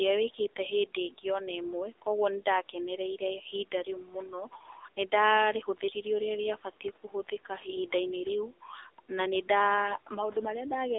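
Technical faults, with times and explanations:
Throughout: AMR narrowband mobile codec. The speech passes through a mobile-phone speech codec that keeps only a 300 Hz to 3.7 kHz line band, with nothing above 3.8 kHz. The damage is plainly audible: voiced sounds turn buzzy and synthetic because the codec rebuilds them from a vocal-tract model fed by sparse pulses. That coarseness fits a low AMR-NB mode of around 8 kbps. On a spectrogram, all energy stops at a flat ceiling near 3.8 kHz, and harmonics look smeared in 20 ms blocks.
1.1–1.42 s and 7.03–7.32 s: speech cut by the noise suppressor. In each window the noise suppressor mistook part of the speech for background, which sits about 24 dB below the voice, and turned it down by as much as about 12 dB. In each case roughly 150 ms of sound is affected, so syllable edges come across as swallowed or faint. On the waveform the envelope sags abruptly there, and the spectrogram shows the speech energy thinning out in patches.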